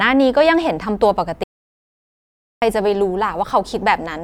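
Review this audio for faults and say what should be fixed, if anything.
The audio input was likely interrupted by a lost link, a disconnected device or a stray mute while recording kept writing silence. The result is an audio dropout to silence from 1.44 to 2.62 s, where 1.18 s of speech vanishes into total silence with no room tone before resuming abruptly. Securing cables and links and monitoring input levels throughout the recording would prevent this.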